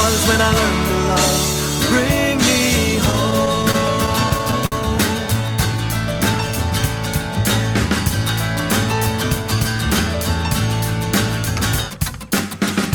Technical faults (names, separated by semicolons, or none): repeated stalls (stutter); jitter buffer slow-down